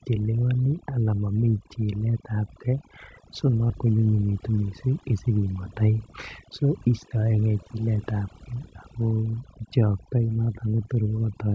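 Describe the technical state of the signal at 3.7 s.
Between 3.70 and 3.72 s there is a skip ahead: a stretch of audio was dropped, roughly 0.4 s of it, while later audio was already queued, and playback went on from there with no filler. The result is an abrupt jump forward. Part of the speech simply vanishes and the two sides of the cut are spliced almost directly, so the phrasing lurches and the timing feels clipped.

Over the same moment, as across the whole clip, overdone noise removal is at work. A noise reducer set far too aggressively is pulling individual frequency bands down or out whenever they sit close to its noise estimate, and quieter parts of the speech are removed along with the noise. The background collapses into near silence flecked with twinkling specks, and the speech has its softer detail eaten away. The G.722 call path leaves nothing above 8 kHz.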